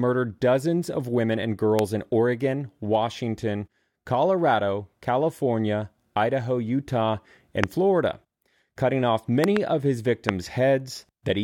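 Loud pops break into the speech at 1.79 to 1.81 s, just after "dozens of women and", at 7.64 to 7.66 s, as a double pop from 9.44 to 9.59 s between "cutting off" and "of his", and at 10.29 to 10.31 s after "of his". Each rises roughly 15 to 25 dB above the speech. The likely cause is a voltage pulse from a switch, plug contact or static. Unlike a dropout or a digital click, the speech carries on underneath each thump.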